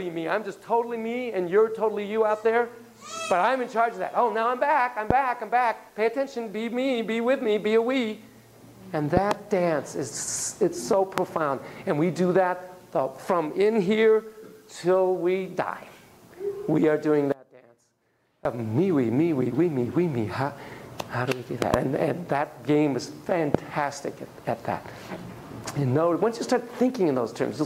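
Loud pops, likely from voltage steps such as a switch, plug contact or static discharge reaching the signal path, sit on top of the audio at 5.11–5.13 s, 9.17–9.33 s, 11.18–11.20 s, 21.62–21.76 s and 23.55–23.57 s. The ones at 9.17 s and 21.62 s are double pops in quick succession. The rest are single. Each peaks at roughly 20 dB above the surrounding level. The sound carries on underneath each sharp transient.

From 17.32 to 18.45 s there is an audio dropout to a faint residue. For 1.13 s the main signal disappears abruptly rather than fading. What remains is a faint leak of the sound, roughly 25 dB below its normal level. Then the full signal returns just as suddenly. The abrupt edges and the residue point to a break upstream, likely a momentary loss of the source connection, while the path after the break stayed live.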